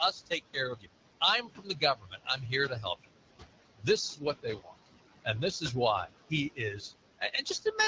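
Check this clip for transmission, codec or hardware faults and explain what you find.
Three faults are present: noise suppressor artifacts across the whole clip, speech cut by the noise suppressor at seven points, and a short burst of AMR bit errors near the end.

Noise suppressor artifacts run throughout. The suppressor pulls down every band it judges to be steady noise, by about 21 dB at most, frame by frame. The room noise sinks in the pauses and rises again under the speech.

Speech cut by the noise suppressor occurs at 0.12–0.57 s, 0.73–0.88 s, 1.42–2.53 s, 3.75–3.88 s, 4.14–4.87 s, 6.5–6.92 s and 7.19–7.79 s. The suppressor mistook quiet parts of the speech for background noise and lowered them by about 17 to 21 dB. Soft consonants and word endings sound swallowed or faint.

AMR bit errors hit from 7.54 to 7.60 s. Over a weak link, the less protected bits in a few consecutive frames arrived corrupted at a rate of several percent, but the checksum still passed. 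The pulse positions and the finer gain and spectral values are wrong, so that brief stretch turns hoarse and gargly while pitch and level roughly hold.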